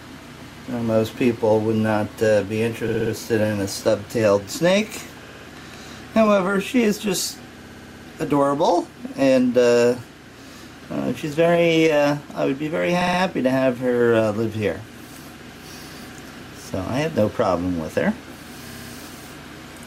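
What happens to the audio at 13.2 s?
A 60 ms run of compressed frames was sent repeatedly from 13.01 to 13.19 s, so the decoder replays it three extra times, a stutter adding 180 ms.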